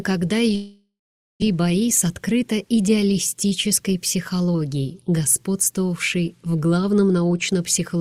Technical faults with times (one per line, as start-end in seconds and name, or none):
0.55-1.44 long network dropout
1.52-4.55 jitter buffer speed-up